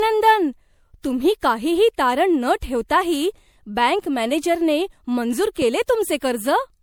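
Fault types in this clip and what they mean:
Generation loss: the speech sounds swirly, smeared and hollow throughout, with softened consonant attacks, likely from about four successive lossy MP3 encodes at roughly 96 kbit/s, each requantising on a shifted frame grid so noise and spectral holes accumulate; nothing remains above 20.7 kHz.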